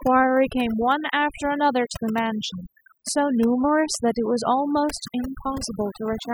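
Overdone noise removal runs through the whole clip. A noise reduction stage set far too aggressively has pulled individual frequency bands down or shut them off wherever they sit close to its estimate of the background noise, and the softer parts of the speech fall below that line and vanish with it. The gaps between phrases drop to near silence flecked with twinkling specks.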